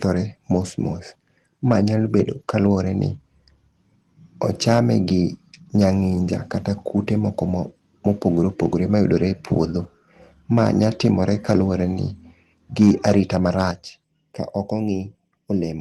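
Input level set too high on the microphone likely drove peaks into the converter's limit between 4.67 and 4.8 s, and again from 12.8 to 13.62 s, overshooting by about 4 dB. The squared-off tops on a small share of samples give the loudest syllables a harsh, crackly edge, more densely in the first burst.

Right after the longer clipped stretch, at 13.71 s, the call software likely reacted to that overload with a microphone volume stepdown. Speech and background fall together by about 7 dB in a single abrupt step.

From 14.04 s to the end, one channel arrives late by a fraction of a millisecond before both are summed to mono, causing channel delay (comb filtering). Shared content cancels at evenly spaced frequencies starting near 1.5 kHz, so the speech turns hollow and phasey.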